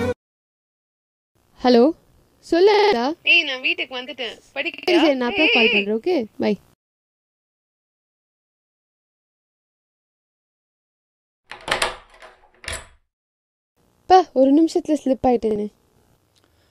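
At 2.74 to 2.93 s, 4.74 to 4.88 s and 15.51 to 15.56 s there's a repeated buffer stutter: new audio came late, so a 46 ms chunk, which fits a 2048-sample buffer, replays four, three, then once, with hard joins, losing roughly a fifth, 0.15 and a twentieth of a second.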